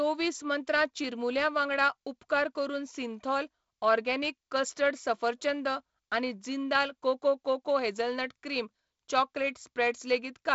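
No technical faults can be heard in this speech, which comes through G.722 wideband telephone coding with content reaching up to about 7.7 kHz.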